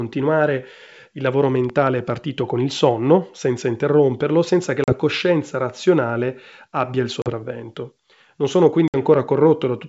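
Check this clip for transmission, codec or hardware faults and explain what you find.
Two kinds of fault affect this speech clip: loud pops and ADPCM packet loss. The G.722 wideband coding underneath carries the speech cleanly.

Loud pop: after "il lavoro", at 1.70 to 1.89 s, two sharp pops peak about 10 dB above the speech. A weaker single pop, about 5 dB, occurs at 9.14 to 9.16 s. A likely voltage transient rides over the continuing speech and shows as tall, narrow waveform spikes and full-height vertical spectrogram lines.

Packet loss on an ADPCM call: after "senza interromperlo senza che" at 4.84 to 4.93 s, and after "coscienza razionale abbia il" at 7.22 to 7.31 s, 40 ms drops to hard-edged silence. Another 60 ms hole falls at 8.88 to 8.97 s, suggesting about three lost packets. The decoder's predictor then resynchronises, causing brief slight distortion, visible as blank spectrogram gaps with hard edges.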